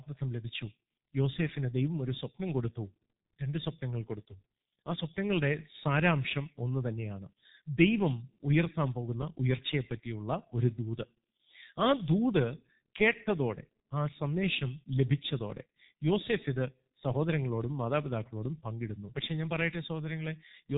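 Throughout, the speech passes through a G.723.1 codec at what sounds like its 6.3 kbit/s rate, cutting everything above 3.8 kHz and leaving voices muffled, hoarse and smeared.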